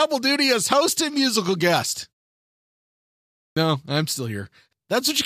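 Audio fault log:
3.52 to 3.57 s, clipped start after a pause: after roughly 1.5 s of silence, the output device had dropped into a low-power state and needed time to wake, so the first 45 ms of speech are swallowed and the word begins abruptly, missing its opening sounds.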